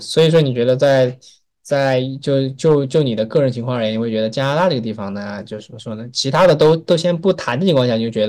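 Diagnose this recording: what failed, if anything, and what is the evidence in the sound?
Hard clipping at the converter or gain stage: speech peaks flatten into harsh crackle at 0.17–1.04, 1.76–1.98, 2.35–3.38, 4.40–4.68 and 6.35–7.82 s, overdriven by about 2 to 8 dB.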